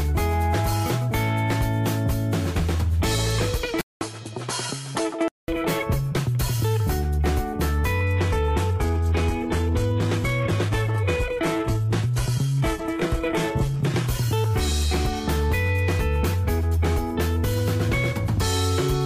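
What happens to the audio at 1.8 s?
Nothing goes wrong at 1.8 s; the audio plays through that moment intact, with no dropout, click or distortion.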